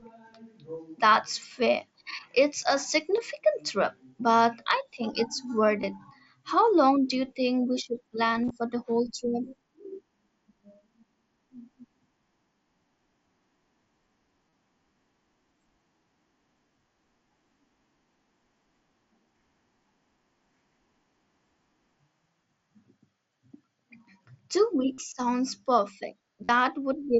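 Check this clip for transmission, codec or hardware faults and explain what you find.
Six dropouts in the clip come from concealed Bluetooth headset packet loss, heard over the wideband mSBC headset codec's 8 kHz speech band. They fall at 3.16 s, 5.82 s, 8.43 to 8.51 s, 14.50 to 14.52 s, 24.93 to 24.98 s and 26.44 to 26.49 s.

Concealed Bluetooth headset packet loss: voice packets were lost between headset and phone, and the receiver filled each gap by repeating a closely matching slice of the audio just before it. The short gaps at 3.16 s and 5.82 s are 15 ms each. The longer ones (about 30 to 45 ms, and a scattered cluster at 8.43 s containing one 37.5 ms run) turn into a held, buzzy tone with a slight warble as normal sound resumes.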